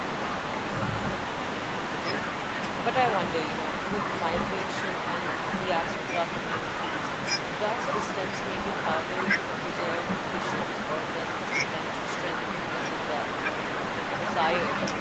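No technical faults are audible.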